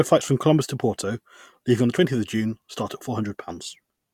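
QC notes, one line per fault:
No faults to log. Nothing in this speech recording calls for a QC entry.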